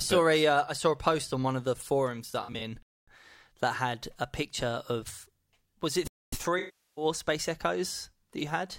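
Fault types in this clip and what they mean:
AAC frame loss with concealment: Smeared, noisy patches appear near 2.26 to 2.61 s after "on one of the", with short losses scattered through that stretch, and a longer one at 6.58 to 7.05 s. Lost AAC frames were rebuilt from the last good spectrum.
Gap between chunks: Two 250 ms holes interrupt the sound, at 2.83 to 3.08 s just before "that had a picture" and at 6.08 to 6.33 s after "picture of was it". The audio was delivered in 3-second chunks, and silence was inserted at each join.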